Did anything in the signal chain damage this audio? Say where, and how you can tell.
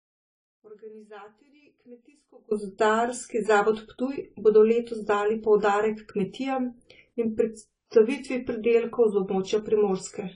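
Yes. Throughout the speech there is AAC compression damage at the codec stage. Nothing is present above 10 kHz, so sibilants sound dull and clipped at the top, and the codec damage is plainly audible as smearing with a warbling, fizzy texture on sustained sounds. The likely cause is AAC-LC coding at a low bitrate, around 24 kbps. Short of bits, the encoder lowered its cut-off and quantised the remaining frequency lines coarsely against its hearing model.

There is also an audio dropout to a faint residue. It is already under way when the clip opens and lasts until 2.51 s, where the signal returns abruptly rather than fading in. Before that point only a faint remnant of the sound is audible, roughly 25 dB below normal level. The likely stage is a network or buffer loss upstream. The wanted signal was interrupted, but the path after the break stayed live and carried only leakage.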